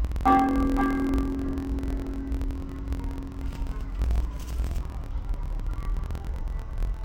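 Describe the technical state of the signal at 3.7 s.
At 3.7 s the audio suffers from interleaved audio read as planar, present throughout the clip. Blocks of about 23.22 ms, consistent with 1024 samples, are split into halves played at half speed. It sounds an octave low, doubled and choppy, showing halved harmonic spacing and vertical seams every 23 ms (43.1 Hz).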